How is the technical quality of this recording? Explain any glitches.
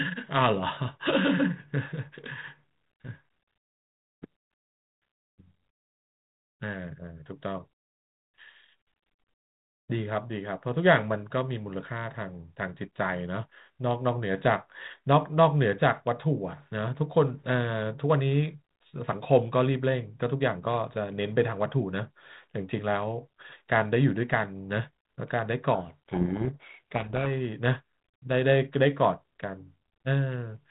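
The speech comes through a narrowband telephone path with G.726 ADPCM at 32 kbit/s, and one glitch stands out. From 25.74 to 27.27 s the speech is buried in harsh, grinding distortion, a codec payload misread: the decoder reads the G.726 code words with their bit order reversed, so every sample difference decodes wrongly.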